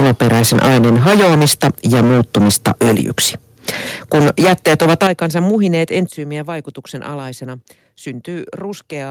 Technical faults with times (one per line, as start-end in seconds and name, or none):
0.00-3.29 microphone overload
3.26 microphone volume stepped down
3.68-3.70 microphone overload
4.13-6.00 microphone overload
5.07 microphone volume stepped down
6.09 microphone volume stepped down